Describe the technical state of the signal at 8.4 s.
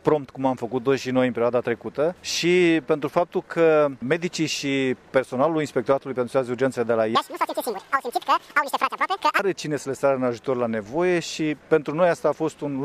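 At 8.4 s the signal sits inside a stretch of audio read two samples at a time (double speed), running from 7.15 s to 9.39 s. The reader treats each consecutive pair of samples as a single frame, as if the data held two channels or samples twice as wide, so it skips through the material twice as fast. The sound plays at 2x speed and an octave (12 semitones) higher.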